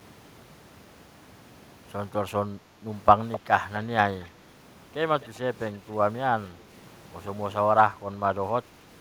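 Background gated by the echo canceller at 2.71 to 2.82 s: the canceller pulled the microphone down, so the room sound dips about 6 dB for roughly a tenth of a second.

Echo leak at 3.32, 4.21 and 5.21 s: a copy trailing 258 ms behind, around 10 dB down at first, then much weaker, likely loudspeaker pickup the far-end canceller missed.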